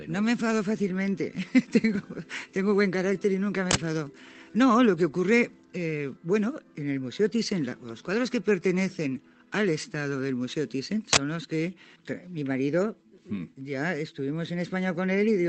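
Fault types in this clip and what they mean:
Uninitialised buffer: a block of audio was sent to the output before any samples had been written into it, so whatever stale memory it held was played as sound. Here it appears twice, at 3.71 s and 11.13 s, each a harsh 40 ms burst of loud digital noise. Unlike a dropout, which leaves a gap of silence, or a single click, this fills the whole block with abrupt, unrelated noise.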